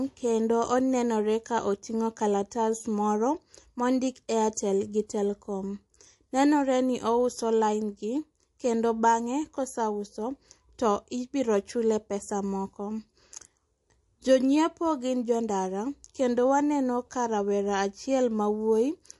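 MP3 compression runs throughout the clip. The damage is plainly audible, which fits a low bitrate of around 48 kbps. The likely cause is an MP3 encoder starved of bits. It discards weaker frequency lines, and those lines flicker in and out from frame to frame. The speech takes on a watery, swirling quality, and consonant edges lose their crispness.

Pre-echo appears from 4.54 to 4.57 s, where a short hiss runs ahead of a sharp attack for about 27 ms. The codec spread its quantisation noise evenly across a transform block. Because the attack fell late in that block, noise sized for the loud onset filled the quiet gap before it, rising by about 16 dB. The smear points to a long window of roughly 48 ms with no switch to short blocks, so the onset sounds soft.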